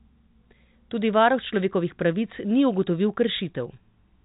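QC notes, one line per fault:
No faults to note; the speech comes through a telephone-band path with nothing above about 3.8 kHz.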